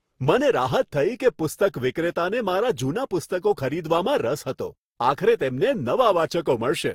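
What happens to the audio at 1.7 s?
At 1.7 s the speech carries stacked compression artefacts that run through the whole clip. Nothing is heard above about 16.6 kHz. This is likely transcoding between lossy codecs. The sound points to a low-rate first pass, such as Opus, re-encoded into Vorbis. The second codec wastes bits on the first one's artefacts and adds its own. Both kinds of damage are heard together.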